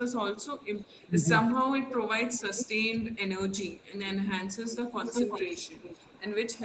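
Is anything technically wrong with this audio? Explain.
Yes, two kinds of fault recur through the clip.

Speech suppressed in double talk occurs at 0.0–0.23 s, 0.93–1.18 s and 2.1–2.89 s. The voice dips by around 20 dB in short stretches totalling only a fraction of a second each time. The likely cause is an echo canceller that heard both sides at once and, unable to separate them, turned everything down. Unlike a packet-loss dropout, these dips are partial and uneven, not clean fixed-length gaps.

Echo leak appears at 0.62–3.16 s, briefly around 3.78–3.86 s, and from 4.72 s to the end. A copy of the voice returns about 0.37 s late. It sits around 15 dB below the speech in the first stretch, is barely audible in the short one, and comes closer, around 10 dB down, at the end. This is likely a far-end loudspeaker echo the canceller failed to remove. A single distinct repeat at a steady delay sets it apart from room reverberation, which smears into a diffuse tail.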